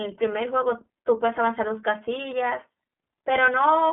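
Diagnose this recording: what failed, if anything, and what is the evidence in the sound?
iLBC codec throughout, a codec-stage fault: nothing above 3.8 kHz, and speech sounds rough and synthetic because each 30 ms frame is coded independently.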